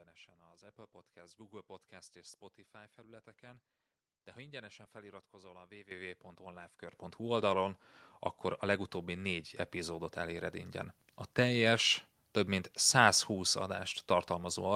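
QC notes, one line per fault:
5.91 s and 6.93 s, microphone volume stepped up: right after "ha ingyenesen feliratkozol a" the speech and the background noise jump louder together in one sudden step of about 11 dB, then about a second later a second step adds about 8 dB. Because voice and room rise as one, the change happened at the input, not at the talker. The call software judged the microphone too quiet and raised the device's input volume in two abrupt increments.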